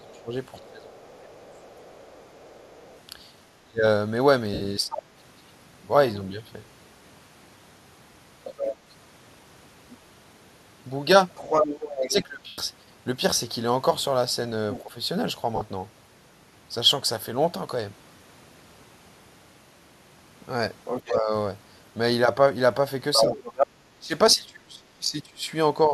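Speech suppressed in double talk runs from 0.0 to 4.96 s, 11.98 to 14.94 s and 21.05 to 25.91 s. The talker's speech dips by up to about 20, 15 and 25 dB respectively, adding up to roughly one, under one and two seconds of affected sound. The likely cause is an echo canceller that, with both parties speaking at once, could not tell the near talker from loudspeaker echo and attenuated everything. Alongside this, the other side's voice leaking through is audible from 0.2 to 5.02 s at a faint level, about 30 dB below the talker, and then from 8.44 to 14.8 s and 20.85 to 24.35 s at roughly the same level as the talker. That second voice is likely far-end audio from the device's loudspeaker that the canceller failed to remove from the microphone signal. Lost LE Audio frames produce brief gaps of 70 ms at 4.54 s, 110 ms at 12.47 s and 50 ms at 15.56 s, where the sound turns into a noisy smear rather than clean silence. 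This is the LC3 decoder concealing missing Bluetooth packets by repeating the last spectrum with randomised signs and fading it as the loss continues. The gap lengths point to runs of roughly 7, 11 and 5 consecutive 10 ms frames.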